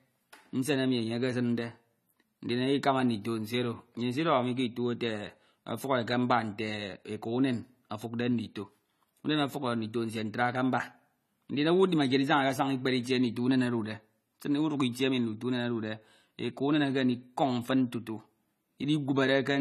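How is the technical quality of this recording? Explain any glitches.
Quality is held back by compression damage across the whole recording. AAC compression, throughout: nothing reaches above 14 kHz, and the speech sounds dull and smeared, with a warbling, fizzy edge on sibilants. This is likely AAC-LC coding at a low bitrate, around 32 kbps, which lowers the bandwidth and coarsely quantises frequency bands, leaving spectral holes.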